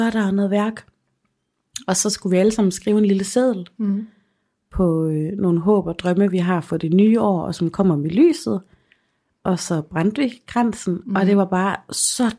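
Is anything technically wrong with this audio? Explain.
No, nothing technically wrong can be heard here.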